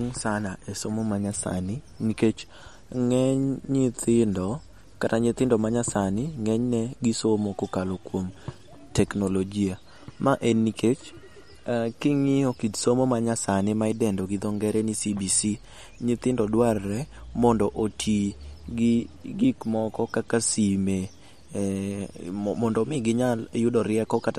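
Throughout the speech, the audio has likely passed through MP3 compression at a starved bitrate, fitting about 48 kbps. The encoder cuts everything above 15.2 kHz and toggles weak frequency lines between frames, leaving a plainly watery, swirly sound with metallic s sounds.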